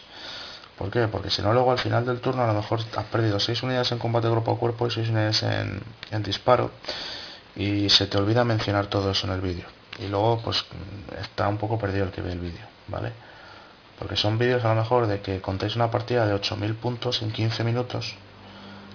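Aliasing runs throughout: content above 5.5 kHz folds back as fairly strong gritty, metallic tones, which fits downsampling to about 11 kHz without an anti-aliasing filter.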